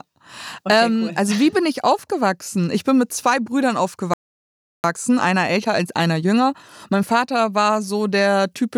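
At 4.14 s the speech halts mid-flow and stays silent until 4.84 s, about 0.70 s. This playback stall likely comes from the player running short of data or its thread being blocked.

From 4.84 s to 7.84 s the speech runs about 1.1 times fast while keeping its normal pitch. This is time-compressed catch-up: small pieces are cut and cross-faded to shrink the backlog. Unlike a sped-up tape, the pitch stays put.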